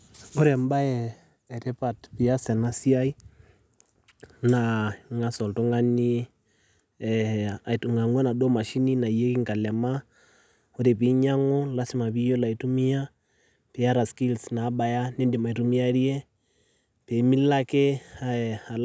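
No technical faults can be heard anywhere in the recording.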